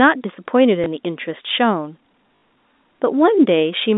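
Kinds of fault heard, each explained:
Packet loss with last packet repeated: at 0.84–0.86 s and 2.36–2.42 s, the missing stretches were filled by replaying the previous packet out of step with the speech's pitch. The 60 ms gap, fitting three 20 ms packets, stutters with a robotic 50 Hz buzz.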